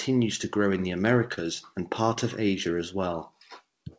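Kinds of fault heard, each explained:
Short concealed packet loss: a few hundredths of a second arrived too late, so the receiver stretched the last sound to cover it. Just after "to grow in the", around 1.34 to 1.43 s, there's a brief smear with a sliver lost; another quick wobble lands near 2.14 s.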